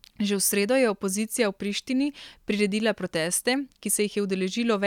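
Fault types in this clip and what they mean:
No technical faults can be heard anywhere in the speech recording, and the signal holds steady throughout.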